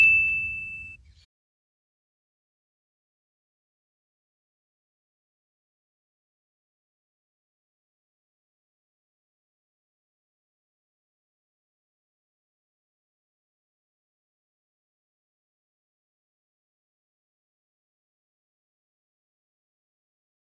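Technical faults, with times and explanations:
No technical faults are audible anywhere in the audio.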